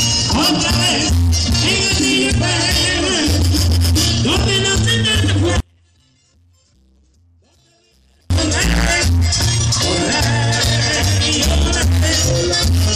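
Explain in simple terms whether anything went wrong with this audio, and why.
At 5.60 s the sound suddenly drops away, and it doesn't come back properly until 8.30 s, so nearly 2.7 seconds go missing. That's an audio dropout to a faint residue. The gap isn't true silence: you can still just make out a very faint trace of the sound, far below its normal level. The cut in and out is abrupt, not a fade, so the likely cause is a brief break in the signal feed while the rest of the chain stayed live.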